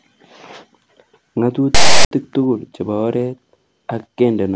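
At 1.75 s a hard-edged burst of loud, rasping static cuts into the speech, lopsided as though pushed to one side of the waveform, then drops abruptly to dead silence until 2.11 s, just before "tugul chebo oret". It is file tags played as audio: a block of text metadata, followed by zero padding, has been decoded as if it were samples. The text produces the rasp and the padding produces the silence.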